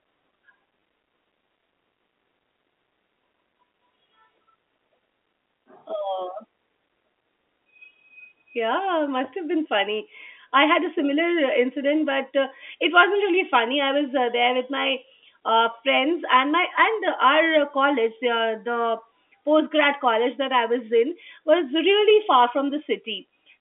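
At 0.80 to 0.82 s, a brief packet loss with last packet repeated occurs: about 20 ms of speech went missing, which fits a pair of 10 ms packets, and the receiver filled the gap by replaying the last good packet. The repeated audio sounds like a tiny robotic stutter. On the waveform, a short stretch of identical repeated cycles appears. On the spectrogram, the event sits within the G.711 telephone band that stops near 3.5 kHz.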